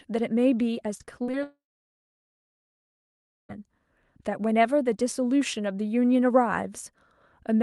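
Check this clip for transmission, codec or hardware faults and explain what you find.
Two network faults are audible in this speech, close together near the start, carried over a call path whose top end stops at about 12 kHz, consistent with Opus at around 32 kbps.

From 0.97 to 1.35 s there is repeated packet loss with a robotic sound. Four short holes open in quick succession, the longest about 41 ms, totalling roughly 100 ms. The receiver bridges each one by extending the last bit of sound, so just over a quarter of this span is synthetic fill. The result is choppy, with pieces missing. Unlike a single dropout, the audio keeps returning between holes, giving a stuttering texture rather than one break.

From 1.43 to 3.51 s comes a long network dropout. Around 2.06 s of audio never arrives. The concealment first stretches the last sound into a fading buzz or hiss, then gives way to silence for about 1.9 s. 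The speech resumes at 3.51 s with the missing portion gone. This is likely a sustained interruption on the network rather than a clipped recording or muting, because of that brief synthetic tail before the silence.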